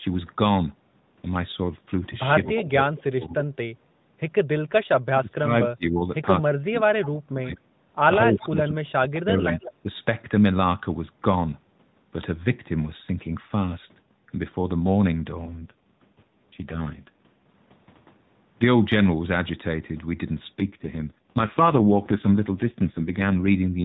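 At 2.44 to 2.65 s a delayed copy of the speech appears, about 10 dB below the direct signal and trailing it by roughly 214 ms. This is an echo leak, likely from a far end on loudspeaker whose echo canceller let part of the returned audio through. The same fault returns more weakly at 9.15 to 9.2 s, about 20 dB down, and at 9.59 to 9.73 s, about 15 dB down, both with a delay near 199 ms.

Overlapping the first echo, speech suppressed in double talk begins at 2.47 s and runs to 3.38 s. The talker's level pumps downward by up to about 25 dB for around half a second in total. The same ducking recurs at 4.88 to 6.01 s with dips reaching about 40 dB, at 6.41 to 7.57 s, and at 8.26 to 9.85 s, the last two reaching about 30 dB. Each lasts roughly a second in total. The likely cause is an echo canceller that could not separate local speech from loudspeaker pickup while both sides talked, so it attenuated everything. 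The result is speech that fades, dulls or drops out in fragments.

From 15.44 to 17.47 s, and again from 20.6 to 23.49 s, the narrowband mobile coding turns buzzier and more synthetic, with no gap and no change in bandwidth. This is an AMR rate drop. The sound suggests the network pushed the codec from 12.2 kbps down to 4.75 kbps, trading speech detail for error protection on a weak radio link. Each time the rate recovers, the texture returns to the cleaner 12.2 kbps quality.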